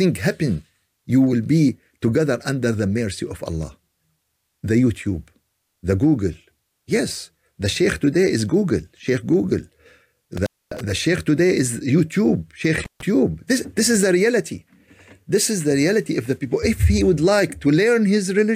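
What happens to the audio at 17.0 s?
Nothing goes wrong at 17.0 s, and the audio plays through that point intact.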